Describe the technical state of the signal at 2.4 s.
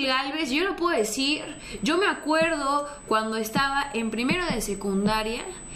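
At 2.4 s you're sitting inside a stretch of USB whine that starts around 0.97 s and runs to the end. The bus's 125-microsecond microframe current draw leaks in, giving a steady 8 kHz whine, strongest at 16 kHz, about 15 dB under the signal.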